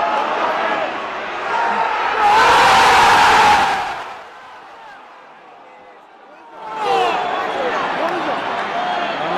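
At 0.75 s, compressed frames are skipped: roughly 70 ms of audio vanishes, which fits a few lost 20 ms frames, so the sound jumps ahead at the join. From 3.5 to 4.3 s, zipper noise accompanies a drop of about 25 dB, applied in 3 dB steps around ten times per second, so each step ticks audibly. From 6.5 to 6.9 s, a rise of about 25 dB zips the same way, at roughly twenty steps per second.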